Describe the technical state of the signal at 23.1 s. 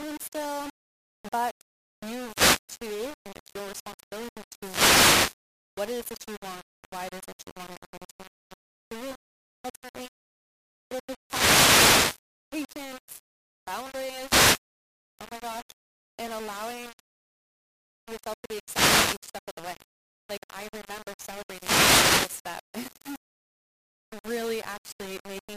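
At 23.1 s the speech is still carrying the low bit depth without dither that runs through the whole clip. The likely cause is that the signal was rounded to very few amplitude steps, consistent with about 5 bits, with no dither to decorrelate the error. The rounding error therefore tracks the waveform, sitting roughly 20 dB below the speech. It shows up as a grainy, signal-dependent distortion, with quiet passages turning gritty and sputtering between steps.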